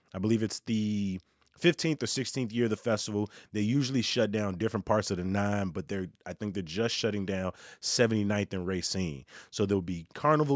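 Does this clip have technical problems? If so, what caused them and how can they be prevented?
No, there are no technical problems to hear in this speech clip. With no fault present, there is no cause to trace and nothing that needs preventing.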